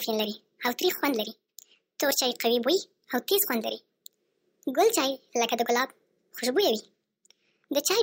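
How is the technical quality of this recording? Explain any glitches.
The recording runs too fast and too high throughout, a wrong sample rate fault. From start to finish the speech is hurried by a factor of 1.5 and raised about 7 semitones, a ratio that fits audio captured at 32 kHz but played back at 48 kHz with no conversion. Each sample is simply output sooner, so timing and pitch scale together. That linkage separates it from a pitch shift, which leaves pace unchanged, or a time-stretch, which leaves pitch alone.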